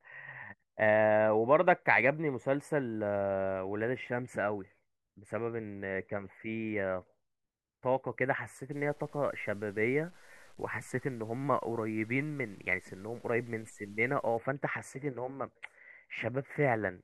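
Low bit depth without dither runs from 8.72 to 14.37 s. Across this stretch the speech takes on a grainy, rasping texture that tracks the speech, roughest on quiet syllables and trailing sounds. The quietest moments sputter or drop out instead of fading smoothly. The error sits around 35 dB below the speech, which fits 9-bit truncation. The likely cause is rounding down to a coarse step size without dither, so the error stays tied to the signal instead of becoming steady noise.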